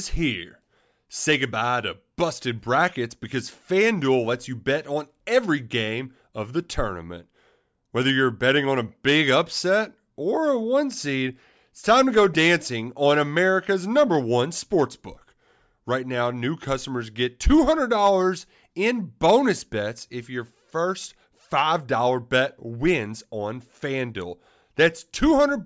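No technical faults can be heard anywhere in this recording.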